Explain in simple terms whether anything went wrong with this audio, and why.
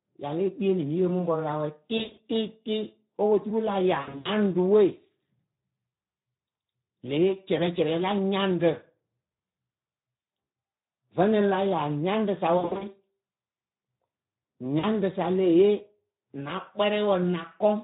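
The whole recording was squeezed through the Speex codec, an older internet-call speech codec, at a fairly low quality setting. It doesn't have enough detail to rebuild the voice properly, so the speech sounds noticeably hoarse and grainy from start to finish.

On top of that there's VoIP packet loss concealed by the speech codec: bits of the call went missing, and the decoder filled each gap by stretching the last sound it had into a smear that fades away. This happens from 1.97 to 2.19 s (right after "pɔrʊ ra wɛ tɩ"), from 4.01 to 4.29 s (after "tɩ opoturu la ya"), from 10.43 to 10.53 s, from 12.57 to 12.85 s (after "la ya nyaŋɖɨ sa"), and briefly from 14.79 to 14.85 s. Each patch lasts from well under a tenth of a second to roughly a quarter of a second.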